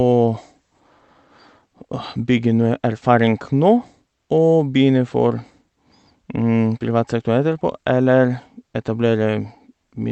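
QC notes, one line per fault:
Nothing stood out on listening to this speech recording, which came over a call path that sounds as expected.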